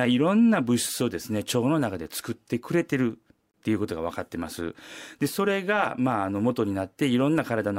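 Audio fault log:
3.51–3.54 s, gap at a join of encoded pieces: the speech drops out for about 29 ms and then picks up right where it stopped, with smeared edges. That's encoder start delay and last-frame padding left in where separately encoded chunks were butted together.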